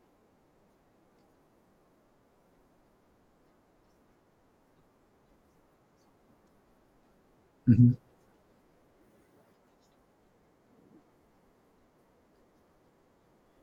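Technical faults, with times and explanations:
1.19, 2.86, 6.48, 9.92 and 13.35 s: damaged data in a compressed stream. Each is a brief chirp or blip in the speech. Corrupted bytes make the decoder misread those frames and lose sync. It then hunts for the next valid frame header before resuming.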